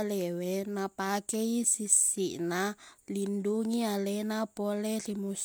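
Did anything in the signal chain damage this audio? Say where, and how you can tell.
No, nothing I can hear in this speech points to damage anywhere along the chain, so there's no stage to single out here.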